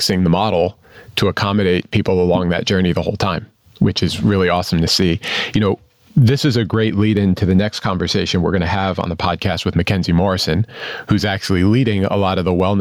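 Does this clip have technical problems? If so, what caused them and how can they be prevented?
Yes. Gain pumping runs throughout. The gain swings around 20 dB, pulled down under loud moments, so loud and soft parts end up closer in level. This is likely caused by excessive input gain and a fast limiter. Prevent it by lowering input gain so the limiter rarely engages.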